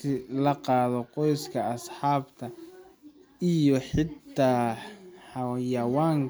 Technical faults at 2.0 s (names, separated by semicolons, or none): none